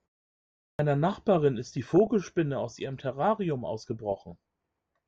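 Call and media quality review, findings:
Clipped start after a pause: speech onset at 0.55 s arrives chopped, about 240 ms missing after the 0.55 s of silence before it. Points to the output device sleeping through the quiet and taking a moment to wake and relock, so the first sounds get swallowed.

DAB burbling: two stretches, 1.70–2.12 s and 4.10–4.35 s. Burbling over the speech. Likely weak DAB reception: a fraction of a percent of bit errors sneaking past error correction into the MP2 stream, knocking individual sub-bands up and down in level frame by frame. The second burst is shorter.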